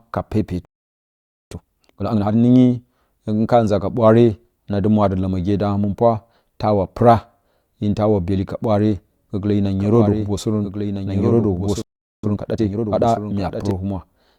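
At 0.65 s the speech cuts to silence for about 0.86 s until 1.51 s: a playback stall, likely the player running out of data or being blocked. From 1.51 to 2.37 s the speech rushes at twice normal speed with unchanged pitch. This is time-compressed catch-up, trimming the backlog by splicing out short pieces. From 9.8 s to 13.7 s a dry, full-band second copy trails about a second and a half behind, roughly 5 dB quieter, starting and stopping abruptly. This doubled audio track is likely from a second, slower capture path. Within it, a second playback stall silences the output from 11.82 to 12.24 s, about 0.41 s. Hurried catch-up follows at 1.5 times speed until 13.06 s.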